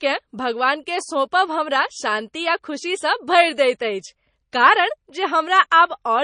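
Throughout, the speech has a plainly watery, swirly edge and stops dead at 9.8 kHz, likely MP3 compression starving for bits, fitting roughly 32 kbps.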